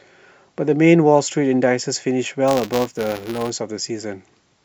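From 2.48 to 3.50 s the speech carries buffer tearing: writer and reader of the playback ring buffer have slipped, so a small slice of each period, roughly 2 percent, replays audio from about 10 ms earlier between hard joins. This gives a robotic 188 Hz buzz, which fits a 256-sample buffer.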